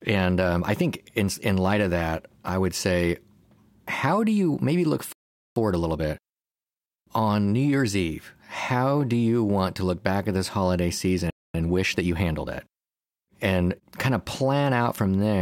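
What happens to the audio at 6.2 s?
At 6.2 s you're in the middle of a time-compressed catch-up running from about 5.56 to 8.46 s. The player is clawing back its backlog by snipping out tiny chunks and cross-fading the gaps, so the speech runs about 1.15 times fast at normal pitch.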